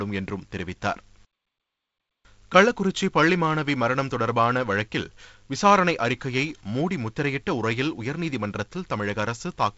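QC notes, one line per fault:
0.37 s and 4.44 s, dropped samples: each is a single sharp, dry click with no gap or loss of sound, showing as a thin vertical line through the spectrum up to the band edge near 7 kHz. The likely cause is a couple of samples missing from the stream, well under a millisecond, so the waveform jumps straight from one value to a later one. That sudden step is heard as a brief broadband tick rather than a dropout.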